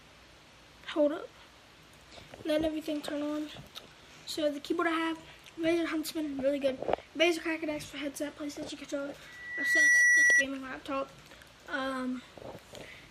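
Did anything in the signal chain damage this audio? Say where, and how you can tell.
Yes. At the capture end, the microphone picked up the loudspeaker it was feeding, and loudspeaker feedback squeal erupts from 9.26 to 10.45 s. A steady 2 kHz tone swells over about half a second, reaching roughly 10 dB above the audio, because the loop's gain exceeded one at that frequency.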